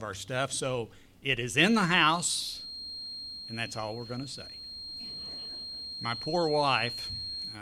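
From 1.52 s to the end, a thin, steady feedback whistle at 4.2 kHz sits about 10 dB below the sound, swelling and fading slowly in level. The likely cause is a loudspeaker-to-microphone loop held just at the edge of feedback, sustaining that single tone without building further.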